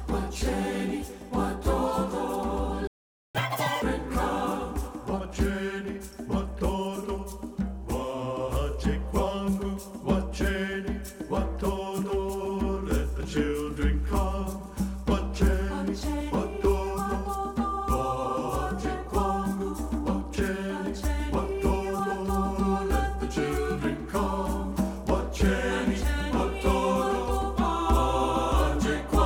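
The audio has a playback stall from 2.87 to 3.35 s, going silent for about 0.47 s, most likely because the player ran short of data or its thread was blocked. A catch-up at higher speed follows from 3.35 to 3.82 s: the backlog plays at 2.0x, with pitch raised roughly ten semitones, before returning to normal rate.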